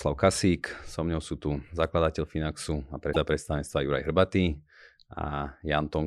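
At 3.12 s the speech jumps forward and a short glitch lasts until about 3.16 s, roughly 40 ms. The likely cause is a broken MP3 bit reservoir: after frames were lost, the next frame reached back for borrowed data and decoded bytes belonging to another frame. The span is about one and a half frames of about 26 ms. On a spectrogram it shows as an abrupt vertical seam; the waveform shows a sudden discontinuity.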